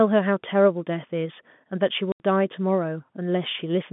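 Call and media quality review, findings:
Packet loss filled with silence, 2.12 to 2.2 s: an 80 ms hard hole in the speech, consistent with about four 20 ms packets dropped and the receiver inserting silence. Narrowband G.711 line sound throughout.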